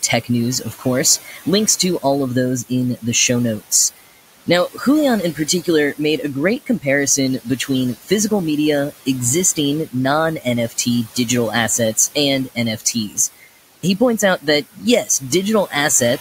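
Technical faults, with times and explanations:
Throughout, noise suppressor artifacts. The room noise, about 16 dB below the speech, is pulled down by about 15 dB frame by frame. It sinks in the pauses and comes back under the speech. The background therefore pumps with each phrase.
0.24–2.04 s, 4.46–4.80 s, 5.35–5.99 s, 7.39–8.31 s, 8.91–11.29 s and 11.97–15.73 s, speech cut by the noise suppressor. The suppressor mistakes quiet parts of speech for noise. It turns them down by about 12 to 19 dB, in short stretches of a few tenths of a second. The first comes just before "of those in the", the second just after "in the show notes", and the third just before "made a great". Soft sounds there come out faint or swallowed.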